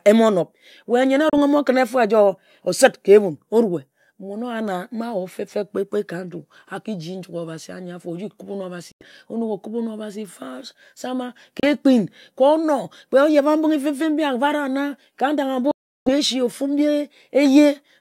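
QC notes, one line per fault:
1.30–1.35, 8.92–9.06, 11.60–11.65 and 15.71–16.10 s, Bluetooth dropouts: the speech cuts abruptly to silence for roughly 30, 90, 30 and 350 ms, then resumes further along as if it had kept playing. Likely late wireless packets being dropped before reaching the headphones.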